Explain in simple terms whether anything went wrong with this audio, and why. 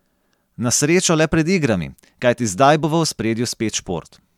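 Nothing went wrong with this speech recording; there is no audible fault anywhere in it.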